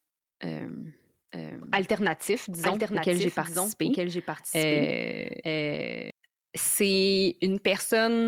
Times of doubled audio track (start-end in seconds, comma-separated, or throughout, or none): 1.32-6.10